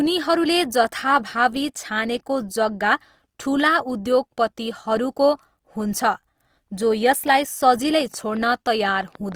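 From start to finish the speech carries plainly audible Opus compression damage, most likely from encoding in Opus's music (CELT) mode at a low rate; the texture fits roughly 24 kbps. The band energies are preserved and the audio stays full-bandwidth, extending to about 20.3 kHz, but the detail within those bands has been rebuilt coarsely. Voiced sounds therefore come out grainy and rough, with a noisy sheen, instead of the swirling holes typical of MP3.

From 8.01 s to 9.33 s a train of clicks sits on top of the speech, likely from electrical interference or a faulty connection. There are about ten clicks of similar shape, arriving at 6.85 per second with uneven spacing. Their peaks reach roughly the level of the speech itself, so they come through as a distinct ragged ticking that stays audible in the gaps between words as well as over them.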